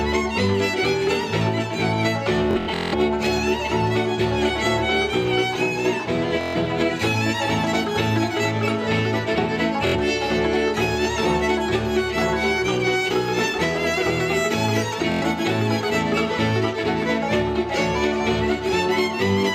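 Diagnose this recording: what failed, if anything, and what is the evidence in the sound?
The Bluetooth link dropped or delayed audio packets, so the receiver replayed its last short buffer until fresh data arrived. This produced a buzzing Bluetooth stutter at 2.51–2.95 s (about 325 ms lost), 6.41–6.57 s, 9.87–9.96 s and 15.12–15.22 s. Each time, the sound resumed further along.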